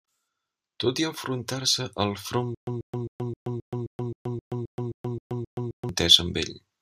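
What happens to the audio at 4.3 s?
Stutter with silent gaps runs from 2.55 to 5.89 s, likely a stalled stream replaying its last fragment at each retry. A 137 ms burst repeats twelve times, separated by about 126 ms of digital silence every 264 ms, and the intervening speech is lost.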